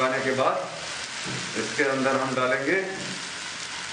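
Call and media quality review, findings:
Word clock ticks: short sharp clicks, about three of them, roughly every 1.5 s between 0.34 s and 3.19 s. Probable component: digital interconnect (S/PDIF, AES or ADAT) into a receiver on its own free-running clock. Clocks drift apart by around 15 ppm, so a single sample is dropped or repeated at each slip, giving a steady tick rate.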